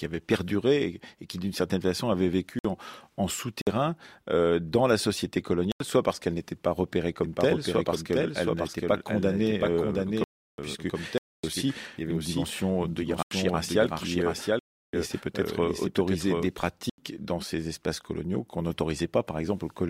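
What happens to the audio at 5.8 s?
At 5.72 s the speech drops into a block of digital silence that lasts until 5.80 s, about 85 ms. It falls right after "euh dans la société" and before "soit parce qu'elle n'était". A run of samples has been replaced by zeros, which fits a 4096-sample output buffer that was not filled in time. The sound stops and restarts with no fade, leaving a short, audible hole.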